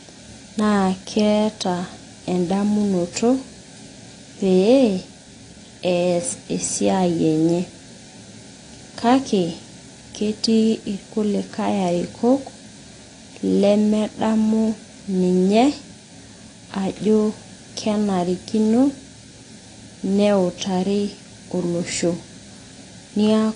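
Speech that has likely passed through AAC compression at a low bitrate, with the codec damage plainly audible from start to finish. Starved of bits, the encoder has discarded everything above 9.9 kHz and quantised what remains coarsely, a loss consistent with something around 32 kbps. The speech therefore sounds dull and lacks air, with a smeared, warbling texture on held sounds and a fizzy, unstable edge on sibilants throughout.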